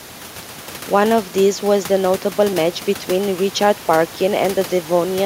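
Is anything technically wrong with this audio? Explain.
No, nothing technically wrong can be heard here.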